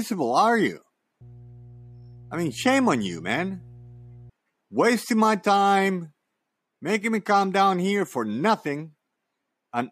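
A speech recording carries mains hum from 1.21 to 4.30 s: a steady 60 Hz tone, roughly 25 dB below the speech, from a ground loop or nearby transformer. A spectrogram shows a flat horizontal line at 60 Hz; the waveform shows a slow, even ripple beneath the speech.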